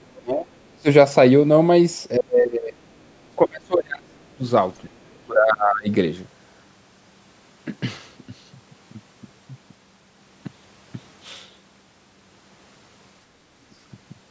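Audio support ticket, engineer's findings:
Other side's voice leaking through, 0.01 to 0.06 s. Brief scrap of a second voice under the talker, very faint, roughly 40 dB down. Likely an echo canceller leaving some loudspeaker playback in the mic signal. Short, easy to miss. Check residual echo suppression at call start.

Speech suppressed in double talk, six events: 0.16 to 0.88 s, 2.17 to 3.09 s, 3.36 to 4.43 s, 4.94 to 5.89 s, 13.32 to 13.42 s, 13.7 to 13.76 s. Talker's level dips hard, deepest around 35 dB in the first two, around 25 dB next, about 15 dB at the end. Likely the echo canceller mistaking near speech for echo and ducking both. Longest gaps reach about a second. The call microphone processing passes nothing above 8 kHz, as expected for that path.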